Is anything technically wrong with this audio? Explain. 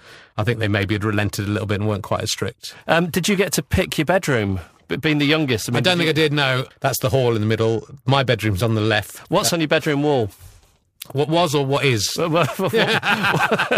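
Yes. Throughout the speech there is periodic clock jitter at around 1 kHz. Interference modulating the converter's clock puts sidebands about 1 kHz either side of every component, stronger on higher frequencies, giving a rough, metallic edge on sound that disappears in the pauses.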